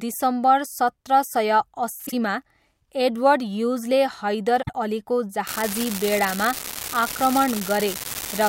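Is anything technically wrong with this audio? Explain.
Yes, there are two kinds of trouble here.

First, frames out of order, twice. Just after "सत्र सय", from about 2.06 to 2.13 s, two neighbouring single frames of roughly 26 ms each got swapped and decoded in that order. At 4.62 to 4.74 s the same thing happens with pairs of frames, blocks of about 52 ms. Each stretch plays with its halves exchanged, so you get a brief garbled flutter. No time goes missing.

Second, from 5.47 s right to the end, an unreliable data bit. One data line seems marginal, so its bit comes out wrong on a random share of samples, and every error lands as a spike of the same size. You hear it as a steady crackle or fizz sitting on top of everything, and it carries straight on through the pauses too.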